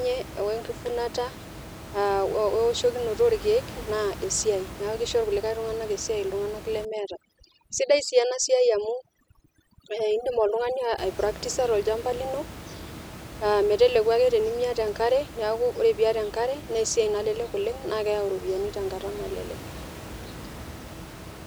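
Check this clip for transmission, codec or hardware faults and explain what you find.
One processing fault shows up in this speech clip, on top of room noise sitting about 15 dB below the talker. From 6.85 to 10.98 s there's overdone noise removal: the suppressor is cranked so hard that it kills bands near its noise estimate, so the background drops to twinkly near-silence.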